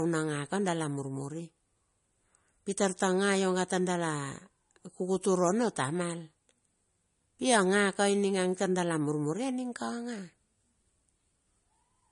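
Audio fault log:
Throughout: low-bitrate audio saved at a high bitrate. The speech was likely encoded first as a low-rate MP3, consistent with roughly 40 kbit/s, then re-saved as a much larger MP3, which points to around 256 kbit/s. The second pass cannot restore what the first removed. Nothing is present above 10.6 kHz, so sibilants and consonant edges sound dull. The grainy, swirling texture of the first encoding remains despite the larger file.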